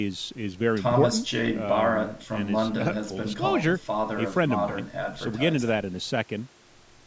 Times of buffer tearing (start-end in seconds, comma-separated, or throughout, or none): none